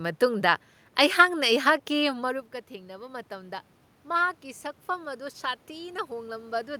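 At 4.87 s the input level drops by about 17 dB, and the automatic gain control responds with its gain rising steadily until the end at 6.80 s. Speech and the room noise swell together over nearly two seconds, unlike the talker's movement near 2 s.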